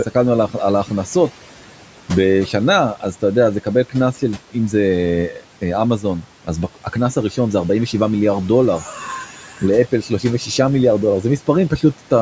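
Noise suppressor artifacts run through the whole clip. The suppressor judges which bands hold steady room noise and pulls them down, frame by frame, by about 12 dB. The room noise sits about 19 dB under the speech. So in the gaps the background drops away, then climbs back when speech starts. The speech band already ends near 8 kHz from the call microphone processing.

From 9.26 to 9.62 s, the noise suppressor cuts speech. It mistakes part of the talker's sound for noise and turns it down with the background. The deepest drop is about 8 dB. Roughly 300 ms of sound is affected. Speech in this stretch comes out swallowed and faint. The level sags briefly and then recovers.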